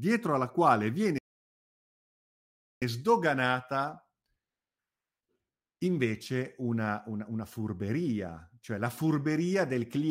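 At 1.18 s the player most likely ran short of buffered data, or its playback thread was held up, so nothing reached the output until it caught up. The result is a playback stall: the speech cuts off abruptly mid-flow and the output falls completely silent for about 1.63 s, until 2.82 s, when the sound starts again, leaving an unnatural gap that breaks the rhythm of the speech.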